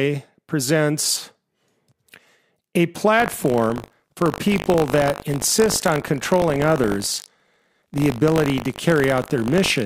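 Buffer tearing runs from 3.18 s to the end of the speech. The program filling the playback ring buffer and the hardware draining it have drifted until they cross inside each period, so a small slice of every buffer still holds audio from roughly 70 ms earlier, spliced in with hard edges on both sides. That repeating splice produces a rough, robotic 50 Hz buzz, which fits a 20 ms buffer cycle, and it sounds only while speech is present.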